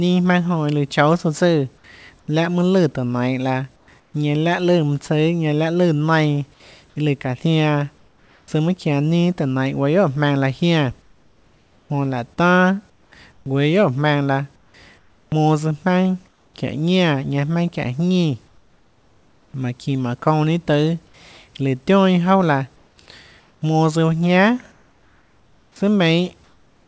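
A discontinuous-transmission sender likely stopped sending in pauses, so comfort noise in place of the background appears in 2.2–2.28, 3.76–4.14, 7.98–8.48, 11.02–16.54, 18.48–19.54 and 22.76 s to the end. The room noise turns steady and featureless, about 1, 4 and 5 dB quieter in the first, third and fifth gaps.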